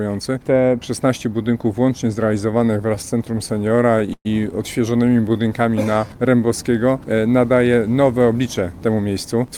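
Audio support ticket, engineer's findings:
Repeated stalls (stutter), 2.51–4.27 s. Audio drags and hiccups through 21 short stalls. Jitter buffer ran dry repeatedly as packets arrived late, and the receiver stretched the last sound to cover each wait. About 319 ms filled in total, around 18% of the span. Longest hold 118 ms, faded. Nothing lost. Spectrogram: smeared, frozen harmonic bands repeating the preceding frame. Waveform: flat-envelope repeats and dips where the longer holds fade.

Jitter buffer slow-down, 4.90–6.46 s. Playback drawn out to 87% speed at unchanged pitch. Buffer low or target delay raised, so the receiver rebuilt its reserve by repeating single pitch periods and slivers of pauses, adding 207 ms. Spectrogram: harmonics stay at the same frequencies but stretch horizontally. Waveform: cycles visibly duplicated back to back, and pauses lengthened.

Jitter buffer speed-up, 8.33 s to end (9.57 s). 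Audio hurried, about 109% speed, pitch unchanged. Buffer overfilled, likely after a burst of delayed packets arriving together. The receiver trimmed one or a few pitch periods at a time, shedding roughly a tenth of a second. Spectrogram: harmonic bands compressed horizontally with no frequency shift. Waveform: periods missing at splice points, and events closer together.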